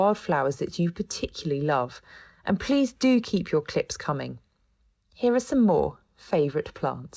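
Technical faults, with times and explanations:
Throughout: clock drift between sender and receiver. The sending clock runs roughly 2% slow, so the jitter buffer keeps draining and small uneven timing hiccups recur.
0.30–7.01 s: repeated timing corrections. To stay in step, the receiver keeps repeating short pieces, adding roughly 150 ms. Playback runs at 98% speed.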